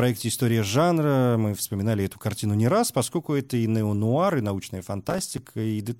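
Right after "и неонуар и научная", from about 5.08 to 5.38 s, there's a burst of processor overload crackle. The processor couldn't finish its audio buffers on time, and a run of them came up empty, each dropping a tiny slice of silence with hard edges into the speech. Strung together over those 0.3 s, the dropouts sound like gritty, tearing crackle. The spacing fits buffers of around 5 ms, with roughly ten of them missed.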